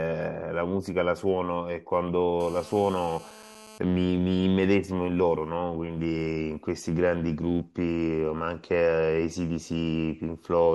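A nearby 2G phone on a call has its radio bursts rectified by the audio circuit, putting GSM phone buzz into this speech from 2.40 to 3.78 s: a steady, raspy 217 Hz buzz about 22 dB below the signal.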